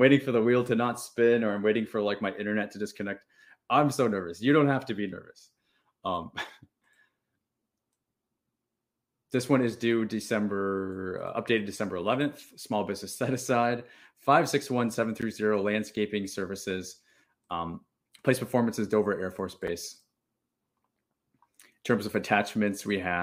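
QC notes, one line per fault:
15.22 s, block of digital silence: between "five six one seven" and "zero landscaping services", the speech drops to silence for about 11.6 ms and returns abruptly. This fits a 512-sample output buffer that was not filled in time. The hard edges on both sides produce a sharp tick rather than an audible hole.
19.67 s, block of digital silence: a shorter dropout of about 5.8 ms, which fits a 256-sample buffer. It sounds like a brief click in the speech.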